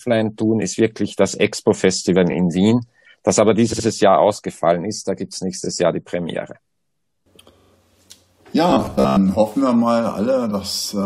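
Three stutters of repeated frames appear in the audio, where a short block of compressed data is decoded and played again. At 2.31 s a 21.3 ms block repeats once, giving a single small hiccup and 21.3 ms of extra time. From 3.72 to 3.85 s a 64 ms block is heard three times in a row, and from 7.58 to 7.71 s a 42.7 ms block is heard four times. Each of these later runs adds 128 ms. Each restart is heard as a stutter, and those block lengths fit a stream built from frames of roughly 21 ms each. Between 8.70 and 9.17 s the sound turns into a rigid, metallic buzz at a fixed 66.8 Hz that loosely follows the underlying signal. This is robotic sound from repeated short buffers. The likely cause is audio arriving too seldom, with the software looping the last 15 ms or so to fill the gaps, which imposes the 66.8 Hz pitch while about half of the real audio is skipped.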